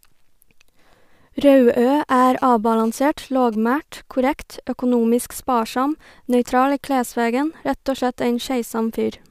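From 2.09 to 3.55 s, a GSM phone buzz cuts across the speech. It is a hard, raspy tone at about 217 Hz with a dense stack of harmonics. It has no relation to the speech. A 2G handset nearby was sending data in bursts at that rate. The audio circuitry picked up the radio pulses and rectified them into sound. The buzz sits about 27 dB below the speech. It appears only for this stretch.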